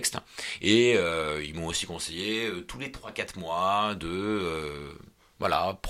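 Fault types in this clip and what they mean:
There are no fault types in this clip.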